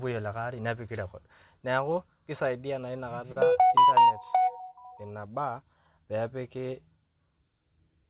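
At 3.32 s, right after "record naaku keisaidiya naa", a packet arrived late and the jitter buffer ran empty: a short stall from a late packet. The receiver stretched the last sound for 40 ms, then resumed, so nothing is lost but that moment drags with a faint buzz or dip.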